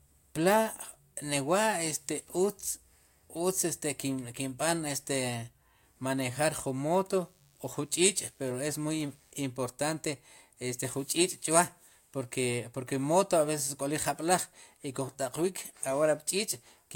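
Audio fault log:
7.08–9.32 s, DECT cordless phone buzz: Right after "manejar jun", a thin, steady buzz rises under the speech and holds for about 2.2 seconds. It repeats at 100 Hz, with a dense stack of harmonics above it. A nearby cordless handset or base fires a short radio burst every 10 ms. The audio circuit rectifies each burst into a click, and the click train becomes the buzz. It sits faint, roughly 40 dB below the speech.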